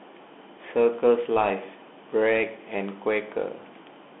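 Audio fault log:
Throughout, Bluetooth CVSD headset codec: the speech sits in a narrow band of roughly 250 Hz to 3.6 kHz, with nothing above 3.9 kHz. The one-bit slope coding is plainly audible, with scratchy s sounds and granular hiss underneath.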